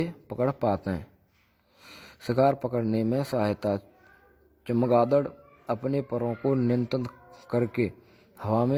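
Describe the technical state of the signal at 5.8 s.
At 5.8 s, as throughout the speech, layered codec artefacts point to transcoding between lossy codecs, likely HE-AAC re-encoded through Opus, with nothing above 19.3 kHz.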